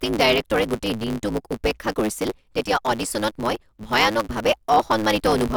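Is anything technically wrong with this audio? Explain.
Yes, there are two problems in this speech clip.

There's a block size mismatch (truncated) running the whole way through. One stage writes longer blocks than the next reads, which fits 512-sample blocks, and the tail of each gets dropped. You hear a buzz at 109 Hz, and the speech runs 1.16 times fast at roughly normal pitch.

At 0.78 s there's a block of digital silence, a 2.9 ms stretch where the samples were swapped for zeros, which fits a 128-sample block. The signal drops out and comes back with no fade, so it comes across as a quick tick.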